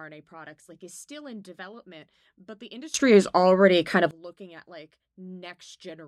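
At 2.94 s a sudden gain jump of about 22 dB lifts speech and background noise together until 4.11 s, likely an unramped digital gain change.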